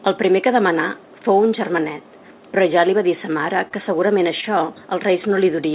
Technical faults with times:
3.68-3.73 short stall from a late packet
4.41-4.44 short stall from a late packet

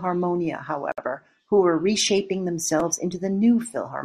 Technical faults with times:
0.92-0.98 gap at a join of encoded pieces
1.42 repeated buffer
2.80 repeated buffer

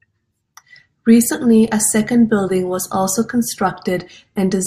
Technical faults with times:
1.67 repeated buffer

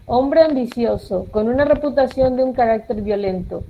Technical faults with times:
0.51-0.57 lost packet rebuilt from error correction

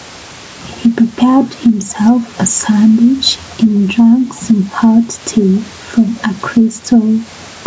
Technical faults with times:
0.00-7.66 gain pumping

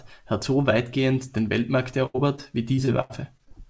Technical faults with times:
2.06-2.16 burst of packet loss
2.16-2.39 short concealed packet loss
2.75-3.52 repeated packet loss (robotic sound)

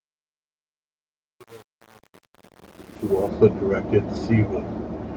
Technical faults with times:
0.00-3.28 truncation distortion on a fade
2.93-2.95 lost packet rebuilt from error correction
4.15 lost packet rebuilt from error correction

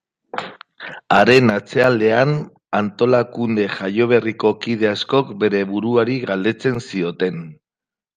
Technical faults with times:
1.83 block of digital silence
6.75 block of digital silence

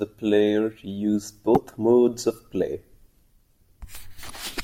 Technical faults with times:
1.54-1.57 damaged data in a compressed stream
4.28-4.30 damaged data in a compressed stream

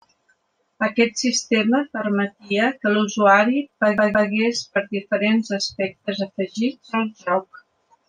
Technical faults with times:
3.98-4.30 CD stuck on one turn

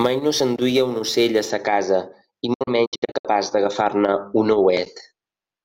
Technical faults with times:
0.00-1.50 sample clock jitter
2.53-3.25 digital broadcast dropout

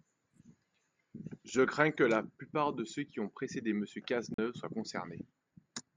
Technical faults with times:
4.34-4.38 block of digital silence

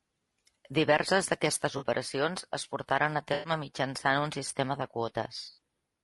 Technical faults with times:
0.00-6.03 low-delay AAC compression
1.77-1.83 AAC frame loss with concealment
3.33-3.51 AAC frame loss with concealment
5.45-5.60 AAC frame loss with concealment

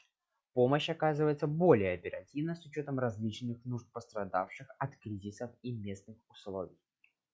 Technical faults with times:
none

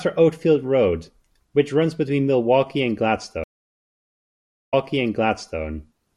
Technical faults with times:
3.44-5.61 stream reconnect

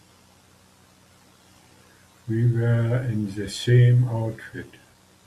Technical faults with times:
none

